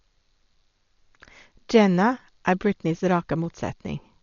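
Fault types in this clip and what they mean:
Dolby Digital compression: likely a low-bitrate AC-3 encode, heavily damaged; speech sounds dull with nothing above 6.9 kHz, and dither-filled bands add rough, fluttering noise around tones.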